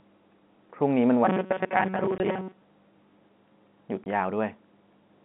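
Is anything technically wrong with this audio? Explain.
Yes, there are two kinds of fault.

From 1.25 to 2.61 s there is robotic sound from repeated short buffers. Audio likely arrived too slowly, so the player kept looping a fragment of about 5.3 ms for most of this stretch, skipping real audio. That loop imposes a fixed 188 Hz metallic buzz that stays flat instead of moving with the speech's intonation, which separates it from a naturally rough or low voice.

There is packet loss filled with silence from 2.18 to 2.20 s and from 4.04 to 4.06 s. Each 20 ms hole fits a single lost packet replaced by zeros. Unlike the buzzing stretch, nothing repeats here. The sound simply drops out with hard edges, and the first gap falls inside the robotic passage.

Throughout, the audio is confined to a telephone band of roughly 150 Hz to 3.5 kHz, as expected from G.711 A-law coding.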